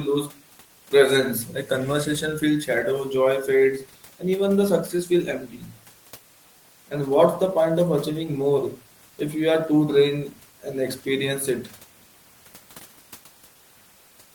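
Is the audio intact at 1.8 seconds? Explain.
Yes, the speech at 1.8 s is intact, with only the room noise sitting about 32 dB below it.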